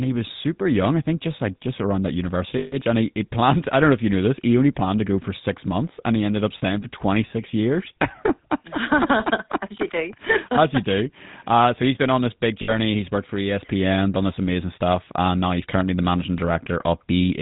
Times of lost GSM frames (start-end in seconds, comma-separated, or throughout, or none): 2.58-2.76, 6.58-6.63, 12.62-12.75